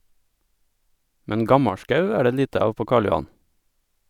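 From 1.69 to 1.90 s the speech drops abruptly by about 6 dB, then recovers; one stereo channel likely drops out, halving the mono sum.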